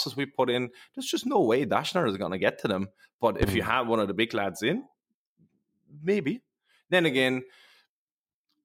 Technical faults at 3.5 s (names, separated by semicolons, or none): loud pop